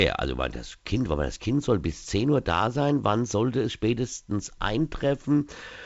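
This is speech carried over G.722 wideband telephone coding, and nothing is technically wrong with it.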